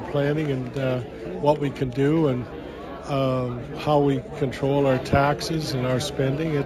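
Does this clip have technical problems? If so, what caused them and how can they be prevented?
Yes. Throughout the clip the top end sounds dulled, and a faint metallic shimmer rides on the brightest, hissiest parts of the sound. This is imaging from linear upsampling: the rate was raised by joining the original samples with straight lines, which filters poorly. The band above about 8 kHz therefore holds weak mirrored copies of the content below it, roughly 35 dB down, extending to 16 kHz. The sound points to a conversion from 16 kHz to 44.1 kHz. To prevent it, resample with a proper band-limited filter, such as windowed-sinc or polyphase, instead of linear interpolation.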